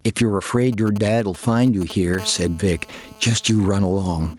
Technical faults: gain pumping; GSM signalling bursts; GSM phone buzz

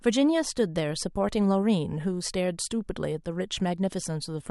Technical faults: none

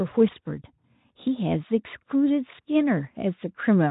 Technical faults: none

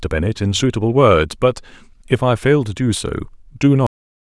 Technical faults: cut-off end

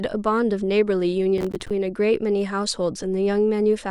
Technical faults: processor overload crackle

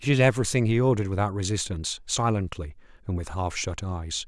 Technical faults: none

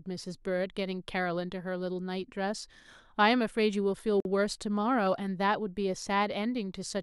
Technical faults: gap at a join of encoded pieces

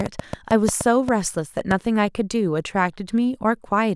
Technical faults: train of clicks

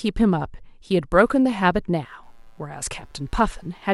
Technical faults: computer activity noise

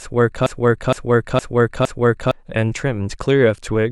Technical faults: broken-record loop

